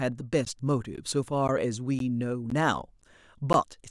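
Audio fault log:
0.45, 0.96, 1.48, 1.99, 2.50, 3.02 and 3.53 s, gap between chunks: the speech stops for 13 ms after every 0.5 s chunk, so hard-edged holes recur evenly. Unlike dropouts, nothing is lost; the sound is delayed, not cut.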